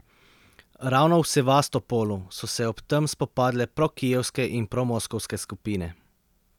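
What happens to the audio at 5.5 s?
At 5.5 s the speech carries on intact, with no dropout, click, distortion or other audible fault at that moment.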